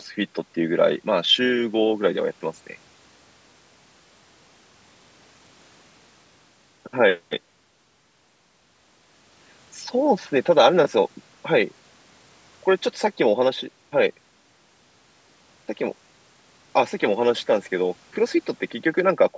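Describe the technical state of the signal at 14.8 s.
At 14.8 s the speech signal is intact, carried through normal call microphone processing with no fault present.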